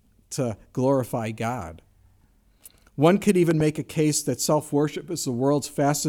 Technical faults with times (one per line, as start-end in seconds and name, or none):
3.51-3.62 loud pop